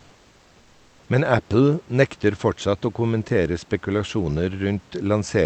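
From 0.00 to 1.07 s, the sender likely stopped transmitting during the pause before speech, so the receiver substituted comfort noise in place of the background: a smooth, detail-free hiss about 2 dB quieter than the genuine room noise that follows.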